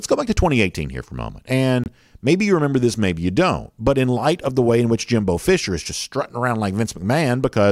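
At 1.84 s, after "here for a moment", flipped bits made a compressed frame undecodable, so the decoder discarded it and the player inserted silence, a corrupt frame muted. The speech cuts off abruptly for 44 ms, consistent with one frame, then resumes on time with "maybe you remember this".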